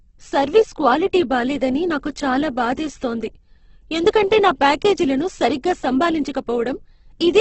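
From start to finish the speech sounds rough and grainy, with nothing above 8.2 kHz. This is likely Opus compression at a rate near 12 kbps, filling starved bands with folded or noisy energy. Unlike MP3, it leaves few spectral holes, so it swirls less.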